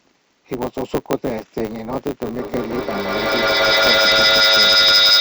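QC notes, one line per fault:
Throughout: block size mismatch (truncated). One stage is writing longer blocks than the next stage reads, so the tail of every block is dropped. Each discarded tail leaves a discontinuity at the block boundary. These repeat as a steady 100 Hz buzz under the speech. Because material is lost every block, the speech runs about 1.09 times fast while staying at roughly its normal pitch. The buzz rate points to blocks about 10 ms long.
2.24 to 5.20 s: feedback echo between two devices. From 2.24 s to the end, each stretch of speech returns at intervals of about a fifth of a second. The cause is a second device in the same room playing this microphone's signal, which the microphone then picks up again. The local echo canceller only removes its own device's playback, so the repeats survive. They sound thinner and more ringing each pass and grow rather than decay, reaching about 9 dB above the speech.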